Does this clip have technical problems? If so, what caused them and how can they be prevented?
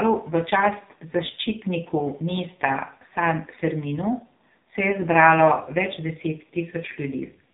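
Yes. The speech has passed through the AMR narrowband mobile codec (AMR-NB), which resamples to 8 kHz and rebuilds the voice from a vocal-tract model excited by a few pulses per 5 ms subframe. For the whole clip nothing above about 3.8 kHz survives, so the voice sounds boxed-in and dull. The damage is heavy, with a buzzy, synthetic edge that points to one of the lowest modes, around 5.9 kbps. To prevent this, record or route the call over a wideband path instead of a narrowband mobile link.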